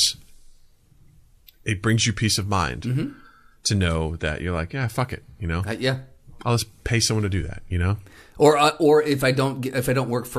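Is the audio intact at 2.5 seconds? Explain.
Yes, the speech at 2.5 seconds is intact, with no dropout, click, distortion or other fault at that point.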